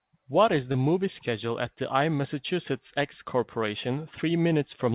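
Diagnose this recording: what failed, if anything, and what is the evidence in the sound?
The failure is a short concealed packet loss at the network stage, heard as a brief smear at 0.72 to 0.76 s in this speech. About 20 ms of audio arrived too late for the decoder, so the receiver synthesised roughly 19 ms by extending the preceding sound, pitch-based if voiced and as shaped noise if not, then cross-faded back into the real signal. The call codec's band limit at 4 kHz, consistent with G.711 mu-law, is audible throughout the clip.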